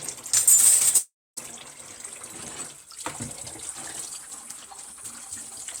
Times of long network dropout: 0.97-1.39

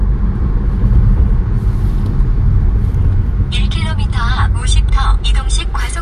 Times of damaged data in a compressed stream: 0.58, 2.74, 4.88-4.90

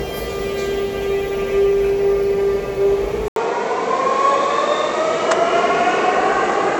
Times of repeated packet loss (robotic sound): none

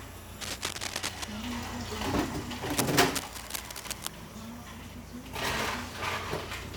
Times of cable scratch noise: 0.41-1.24, 2.76-4.07

